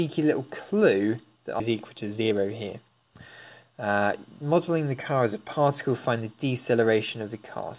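The audio has passed through a narrowband call path, with nothing above 4 kHz, which fits a codec such as G.711 A-law. At 1.6 s there is a skip ahead. About a second of audio is simply missing, and playback jumps straight on with no gap. The jitter buffer most likely discarded that stretch to catch up, since later audio was already queued. From 1.94 s to 3.11 s comes a jitter buffer speed-up. The sound runs at about 113% speed while the pitch stays the same, so it feels hurried. The buffer trimmed tiny pitch-period slices, around 150 ms in total, to shrink excess delay.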